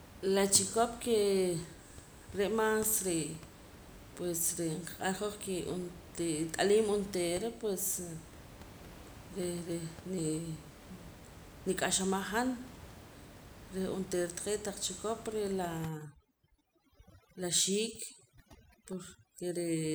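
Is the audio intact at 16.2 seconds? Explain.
No. At 16.2 seconds the gaps between phrases drop to near silence scattered with twinkling specks. This is overdone noise removal, running from 15.89 s to the end at 19.95 s. The noise reduction is set too aggressively for room noise sitting about 19 dB below the speech, so any frequency band close to its noise estimate is pushed far down or switched off, taking quieter parts of the speech with it.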